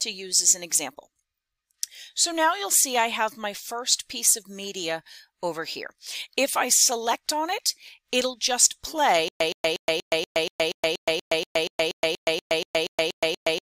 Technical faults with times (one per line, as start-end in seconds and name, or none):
9.28-13.65 stutter with silent gaps